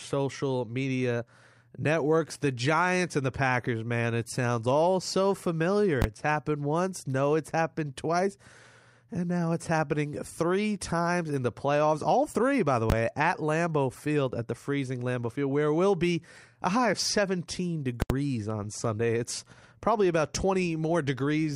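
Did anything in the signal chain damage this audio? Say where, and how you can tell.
Yes. The damage comes from invalid numbers at full scale, a fault in the processing or sample-format conversion stage. At 6.02 to 6.04 s, just after "sounds all so familiar", and at 12.90 to 12.92 s, after "three by the", a 20 ms block is replaced by a single loud bang. At 18.02 to 18.10 s an 80 ms block is hit the same way. A calculation returned infinite or invalid values, and conversion clamped them to the maximum sample value. On a waveform, each event is a flat rectangle held at one extreme value, far beyond the speech peaks. On a spectrogram, it shows as broadband vertical bars at the block's edges.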